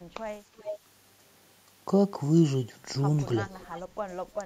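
From 0.57 to 0.78 s and again from 3.61 to 3.81 s, a faint delayed copy of the speech trails it by 355 ms, roughly 15 dB down and then about 25 dB down. This is likely an echo leak through a far-end loudspeaker. Unlike room reverberation, it is a distinct repeat rather than a smeared tail. From 3.87 to 3.98 s, the background is gated by the echo canceller: the room sound dips by about 9 dB for roughly a tenth of a second, then recovers.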